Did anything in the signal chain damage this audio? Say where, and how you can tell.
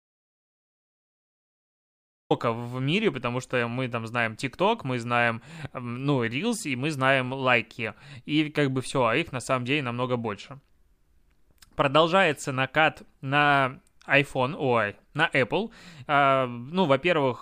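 Yes. The clip opens in an audio dropout to silence already under way, lasting until 2.30 s, where the speech enters mid-flow at "в мире потому что". The gap is silent with no room tone, so the input was likely lost upstream of the recorder or encoder, which kept writing silence.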